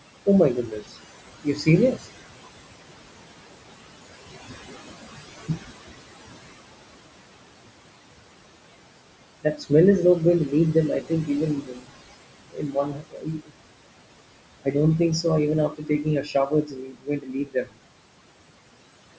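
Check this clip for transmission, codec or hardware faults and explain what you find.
The faults come from the noise suppressor working hard on this speech clip. Its effects run through the whole recording, and in several places it has swallowed parts of the speech.

Noise suppressor artifacts are present from start to finish. The suppressor treats the steady room noise, which sits about 13 dB below the speech, as something to remove. It pulls those bands down by about 21 dB in each frame, so the background drops away in the pauses and comes back up under the talking. On a spectrogram the noise floor shows as a patchy, blotchy haze that turns on with the speech and off in the gaps. The waveform shows unnaturally silent pauses.

Speech cut by the noise suppressor happens five times: 0.26–2.09 s, 5.3–5.64 s, just before "is not going to" at 9.42–9.71 s, just after that phrase at 10.48–13.52 s, and at 14.64–17.79 s. 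In each case the suppressor mistook the quieter parts of the speech for noise and turned them down along with the background. The drops are about 17 to 22 dB deep. Soft consonants and word endings sound faint or swallowed. This adds up to under a second in the first span, a tenth or so of a second at 5.3 s and 9.42 s, and around a second and a half in each of the last two. On a spectrogram, weak high-frequency consonant energy and the tails of syllables break off abruptly. The waveform shows envelopes cut short. The call's band limit at 8 kHz is normal, not part of the problem.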